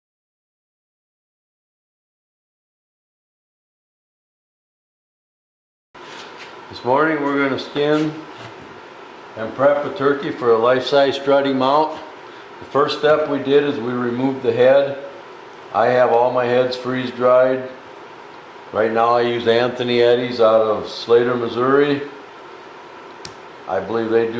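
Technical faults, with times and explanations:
No technical faults can be heard in this clip.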